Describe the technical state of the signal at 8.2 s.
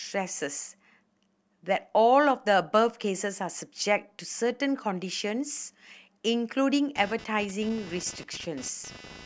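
Computer activity noise runs from 6.96 s through the end of the clip, so it is present at 8.2 s. Shifting load in the machine's processor, graphics card or mouse disturbs the ground it shares with the audio circuitry, and that disturbance lands in the signal as a buzzy, chirping texture pulsing at around 300 Hz. It sits roughly 20 dB below the speech and tracks the computer's activity rather than anything in the speech.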